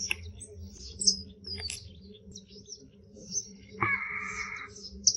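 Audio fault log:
0.77 to 0.81 s, short concealed packet loss: about 20 ms of audio failed to reach the decoder in time, and the receiver bridged roughly 12 ms of it by extending the preceding sound before blending back, leaving a brief smear or wobble where the real signal should be.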